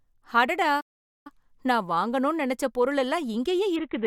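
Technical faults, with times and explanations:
0.80–1.27 s, playback stall: the sound drops out for about 450 ms, likely the player starving for data, then resumes on "நான் வாங்கணும்னு நெனச்ச பொருள்".
3.76 s to the end, Bluetooth SBC bit pool drop: after "வாங்கணும்னு நெனச்ச பொருள் எல்லாம்" the treble dulls and grit rises, which fits the bit pool falling from 28 to 5, around 54 kbps.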